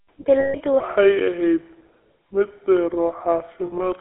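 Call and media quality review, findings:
GSM full-rate codec, whole clip: buzzy, gravelly roughness on speech, band limited to 300 Hz to 3.4 kHz, which fits 13 kbit/s GSM full rate. Distinct from clean narrowband filtering: the coarse pulse excitation adds grit, not just lost treble.

Lost GSM frames, 0.40 to 0.55 s: about 140 ms of speech held as a rough metallic ring, consistent with seven 20 ms frames concealed by repeating the last good frame. Again at 3.66 to 3.81 s: scattered short rings, longest roughly 70 ms. Unlike a plain dropout, there's ringing rather than silence.

Section at the wrong speed, 0.80 s to end: speech runs at 0.687x, slow and deep, roughly seven semitones low. Tempo and pitch drop together, unlike a pitch shift that keeps timing. Likely cause: section played against the wrong sample clock.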